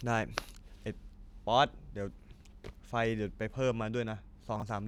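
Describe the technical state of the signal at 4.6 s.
At 4.6 s the signal has chunks out of order, spanning 4.56 to 4.62 s. One 20 ms block of speech arrives two chunks late and plays after the two blocks that should follow it. Nothing is missing, but the sequence is scrambled, giving a brief jumbled flutter. On the waveform, three abrupt discontinuities appear at the block joins. The spectrogram shows thin vertical broadband lines there, with formant tracks jumping backwards between them.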